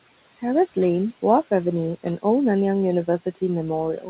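Across the whole clip the room noise, which sits about 20 dB below the speech, pumps down in the gaps and comes back up under each phrase. These are noise suppressor artifacts: the suppressor pulls down, frame by frame, every band it judges to be steady noise, by about 18 dB here. Its gain keeps switching as speech starts and stops.

From 3.98 to 4.08 s, at the very end, the last bit of speech drops away and sounds swallowed, sinking by about 9 dB for roughly a tenth of a second. This is speech cut by the noise suppressor: the quiet tail fell to a level the suppressor mistook for background noise, so it was turned down along with the noise. The missing energy above 4 kHz fits a narrowband G.711 mu-law call codec.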